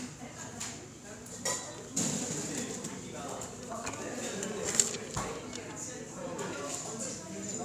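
No technical faults can be heard anywhere in the recording of sounds. Nothing in it breaks, repeats or drops away at any point.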